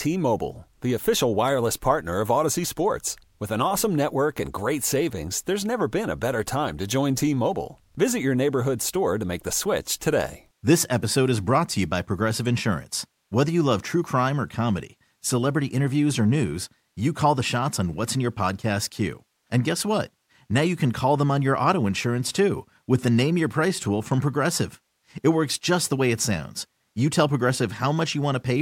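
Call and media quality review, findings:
Nothing stood out on listening to this speech recording.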